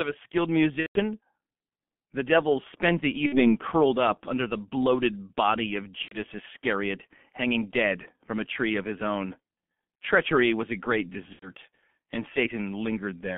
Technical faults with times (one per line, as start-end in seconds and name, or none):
0.00-13.38 G.723.1 codec
0.80-1.00 VoIP packet loss concealed by the speech codec
3.26-3.57 VoIP packet loss concealed by the speech codec
6.02-6.17 VoIP packet loss concealed by the speech codec
11.33-11.51 VoIP packet loss concealed by the speech codec